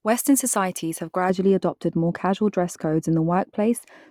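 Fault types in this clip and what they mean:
De-emphasis applied wrongly: a treble cut meant to reverse pre-emphasis that the audio never had. From 1.30 s to the end, the speech turns dull and muffled. Highs fall away smoothly, about 11 dB lower at 10 kHz than at 1 kHz.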